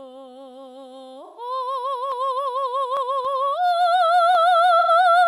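At 1.25 s the music smears into a brief noisy, phasey patch that lasts until about 1.41 s. This is AAC frame loss with concealment. Roughly 128 ms of coded audio went missing, which fits three lost frames. The decoder covered the gap by reusing the last good spectrum with altered phases. So the tone holds, but its detail turns hazy.

Single sharp clicks follow at 2.12 s, 3.25 s and 4.35 s. Each is a single sharp click, with no gap in the music. The likely cause is dropped samples. A sliver of audio far shorter than a millisecond vanished, so the waveform jumped straight to a later value. That step is heard as the click.

From 4.79 s to 4.89 s a second concealed patch appears. It is shorter, covering about 85 ms, which suggests two lost frames. The same frame loss with concealment leaves the sound briefly blurred and phasey there. It does not fade to silence.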